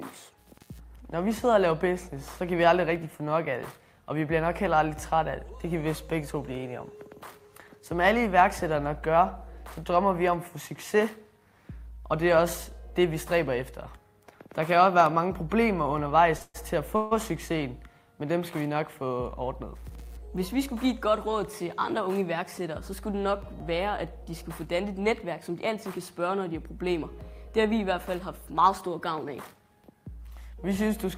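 A single sharp pop at 15.06 to 15.08 s stands out, roughly 10 dB above the surrounding sound, which carries on unbroken beneath it. It is a loud pop of the kind most likely caused by a brief voltage spike, such as a switch, plug or static discharge, which the downstream circuitry shapes into a click-like thump. Shortly after, at 16.37 to 16.42 s, the sound hangs for about 28 ms with a faint buzzy smear. This is a short stall from a late packet: the receiver's jitter buffer ran dry, so it stretched the last fragment until the packet turned up, then resumed from the same point without losing anything. Two longer interruptions follow, at 16.42 to 16.56 s and 16.96 to 17.13 s, each a held tone fading out. In the first, about 121 ms is filled and the last 30 ms or so drop to silence. In the second, about 148 ms is filled with no silent stretch. These are call audio freezes, likely from packets held up in transit. 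The receiver padded the gap with a decaying continuation of the last sound and then picked up where it had stopped, adding delay rather than dropping content. Later, at 21.66 to 22.61 s and 27.12 to 28.10 s, the audio runs faster while its pitch stays the same, at about 105% and 104% speed respectively. This is jitter buffer speed-up. With more audio queued than it aims for, the receiver trimmed many tiny pitch-period-length slices, around 50 ms in total each time, to pull the delay back down.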